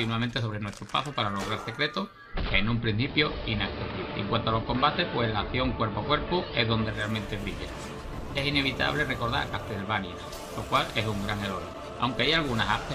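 From 2.07 to 7.14 s, digital radio blending to analogue: a 336 ms crossfade to AM removes treble and adds faint hiss, unlike a dropout's silence.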